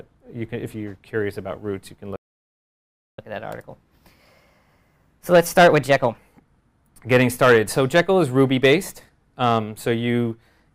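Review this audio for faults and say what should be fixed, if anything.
A playback stall cuts the sound off at 2.16 s, leaving about 1.02 s of silence until 3.19 s. The player most likely ran out of buffered data or had its output thread blocked, so nothing reached the output until it recovered. Unlike a dropout, where a few milliseconds vanish as a click or gap, this is a long, clean halt, and the sound resumes rather than skipping ahead. Prevent it with a deeper playback buffer and a thread that can't be starved.

Catch-up at higher speed follows immediately, from 3.19 s to 6.19 s: the sound runs at 1.15 times normal speed and rises by about two semitones, then settles back. The player is resampling its backlog to win back the time lost in the stall. Because tempo and pitch rise together and then return, this is distinct from clock drift or a wrong sample rate, which would stay shifted throughout. 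Prevent it by letting the buffer refill without audible speed-up, or by using pitch-preserving time-stretching for catch-up.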